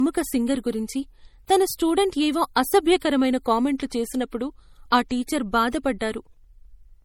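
Throughout the speech, a swirly, watery coarseness typical of heavy MP3 coding sits on every sound, with nothing above 19.5 kHz. This is likely low-bitrate audio saved at a high bitrate: damage consistent with roughly 48 kbit/s encoding, later re-saved near 192 kbit/s, which cannot restore it.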